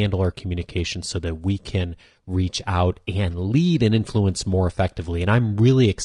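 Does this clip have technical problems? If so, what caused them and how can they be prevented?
Yes. Throughout, the speech sounds rough and grainy, likely from low-delay AAC compression such as AAC-ELD at a bitrate that fits about 32 kbps. Its short frames resolve harmonics poorly. Prevent this by raising the call bitrate or using a longer-frame codec.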